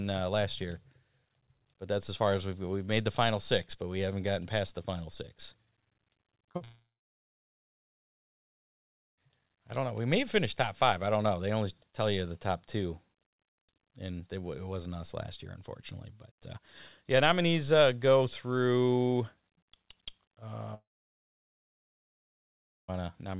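Between 6.42 and 6.45 s, then 6.51 to 6.56 s and 6.56 to 6.62 s, the speech smears and wobbles in quick succession. These are short concealed packet losses: each gap of 20 to 40 ms was bridged by stretching the preceding sound, then blended back into real audio. Unlike a dropout, the speech never stops. It only blurs for a few hundredths of a second, and a short consonant can go missing.

From 6.64 to 9.19 s, and again from 20.74 to 22.90 s, the sound briefly continues as a fading buzz or hiss, then falls silent for about 2.3 s and about 2.1 s respectively. Speech resumes after the first gap on "I don't know". Both are likely long network dropouts: the audio is lost rather than delayed, so nothing is skipped back. The long silence is what separates them from the brief concealed losses. Throughout, the band stops at 4 kHz, which points to a narrowband call codec at 64 kbps.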